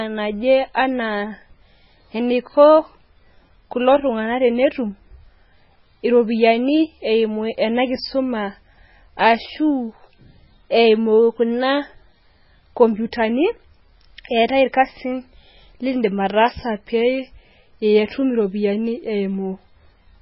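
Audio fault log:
throughout, MP3 compression: watery, swirly speech with nothing above 5.6 kHz, likely from heavily starved MP3 coding near 16 kbps; spectrogram shows a flat ceiling and flickering holes.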